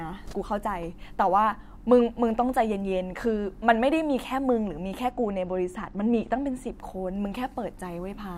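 From 5.11 to 6.73 s, channel delay causes comb filtering: one channel lags by a couple of samples, so summing cancels highs. The sound turns dull, and a spectrogram shows a notch near 10 kHz.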